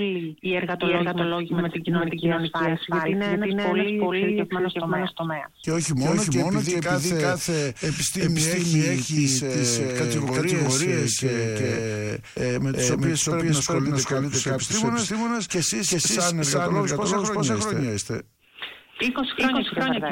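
A doubled audio track runs throughout: a second, full-band copy of the sound trails a steady 400 ms or so behind, at roughly the same level, with no decay or room colour, likely from the signal being captured twice by paths of different latency.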